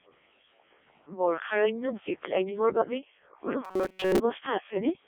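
Throughout, the Codec 2 vocoder at 0.7 kbit/s resynthesises the speech from sine waves, making it heavily robotic and buzzy. The spectrogram shows energy confined to 300 Hz to 3.6 kHz, with nothing above 3.7 kHz. From 3.65 to 4.20 s, robotic sound from repeated short buffers replaces most of the real audio with loops of roughly 5 ms, which points to a starved playback buffer as the likely cause. The result is a rigid 188 Hz metallic buzz, seen as a periodic waveform and flat, evenly spaced harmonics.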